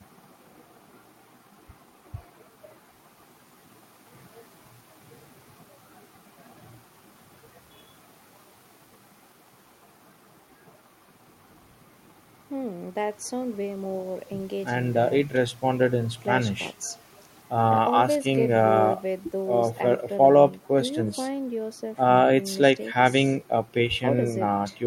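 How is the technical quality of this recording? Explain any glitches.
No glitches or technical faults can be heard here.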